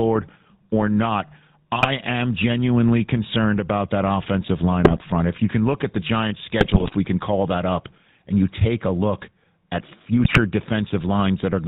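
Speech, carried through a GSM full-rate codec throughout. It sounds buzzy and gravelly, with nothing above 4 kHz, which fits the 13 kbps full-rate coder. GSM bit errors break in as squawks and gargling at 1.76 to 1.87 s, between "or not" and "am genuinely concerned about", and at 4.84 to 5.02 s, after "about that offensive line". They return at 6.60 to 6.95 s, before "we can call that", and at 10.24 to 10.39 s. Corrupted decoder values distort or blow up those frames.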